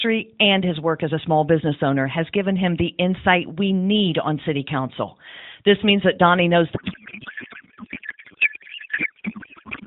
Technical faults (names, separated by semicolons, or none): codec payload misread